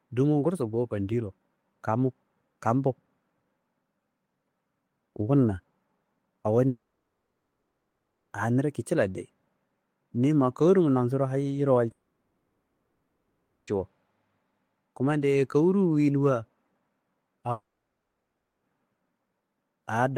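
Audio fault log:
6.67–8.34 s, 11.91–13.70 s, 17.51–18.66 s: long network dropout, likely a sustained loss of incoming packets. About 1.6 s, 1.8 s and 1.1 s of speech are gone. Each gap starts as a fading buzz that continues the last sound. In the first and third gaps it gives way to silence within a few tenths of a second. In the second gap, which begins after "nansuru hayiro", the buzz lasts much longer and the silence lasts only about 0.4 s. The first gap resumes on "a niro kicila".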